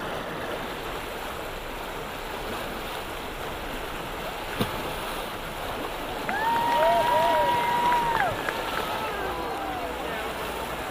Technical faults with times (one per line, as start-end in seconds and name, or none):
none